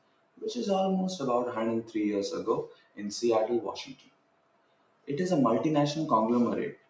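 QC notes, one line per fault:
Throughout, noise suppressor applied to music or sounds: a speech-tuned suppressor treats steady tones, ambience and decaying tails as noise, so gain swings by about 20 dB. Attacks pass while sustained parts sink, causing pumping. The waveform envelope visibly breathes, with nothing above 8 kHz.
0.0–0.43 s, 2.66–3.01 s, 3.68–5.09 s and 6.72–6.9 s, sound cut by the noise suppressor: held or fading material is pushed down about 20 dB, longest across 3.68–5.09 s. The waveform shows collapsed troughs, and the spectrogram shows sustained bands dimming while transients remain as vertical streaks.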